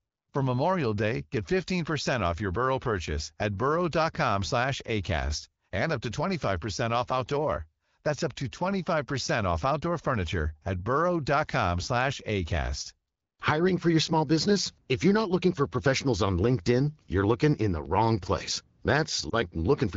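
A lost AMR speech frame occurs at 19.29 to 19.34 s, near the very end of the clip. A single 20 ms frame evidently arrived corrupted, failing its checksum, so the wideband decoder concealed the gap by repeating the previous frame's pitch and vocal tract settings at reduced gain. Because only one frame is missing, the result is a short dip or warble in the speech rather than a fade to silence. The surrounding audio carries the light coding texture of AMR wideband, which fits a rate around 12.65 kbit/s.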